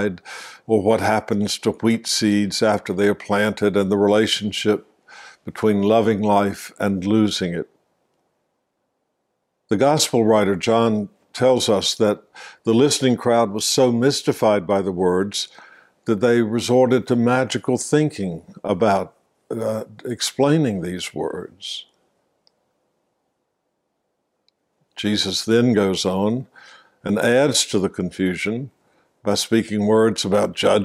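At 13.2 s the sound abruptly runs about 5.5% fast, lifting pitch by roughly 93 cents, close to a semitone, for 0.52 s before snapping back at 13.72 s. This is most likely a drift correction step, where clock-matching software briefly jumped the playback rate to rebalance its buffer. Unlike wow or flutter, the shift doesn't waver or repeat. It is one flat, sudden block of raised speed and pitch with hard edges at both ends.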